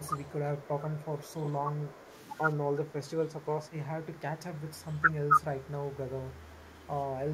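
From 0.02 to 1.34 s, an echo leak adds a faint delayed copy of the speech, about 30 dB down and trailing by 131 ms. The likely cause is a far-end loudspeaker echo that the echo canceller failed to remove. The same copy returns from 1.91 to 2.23 s.

Overlapping the first leak, from 0.33 to 1.89 s, the speech is suppressed in double talk. It dips in short pieces by up to about 15 dB. This is likely a canceller ducking both talkers at once. The same fault recurs at 2.75 to 3.51 s, 4.64 to 5.30 s (dips up to about 20 dB), 5.93 to 6.36 s, and briefly near 7.1 s.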